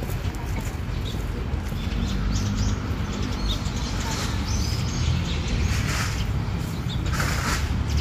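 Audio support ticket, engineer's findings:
Skip at 5.58–5.60 s, audio jumping ahead about a tenth of a second. Compressed frames skipped: several consecutive frames missing or rejected by the decoder as damaged.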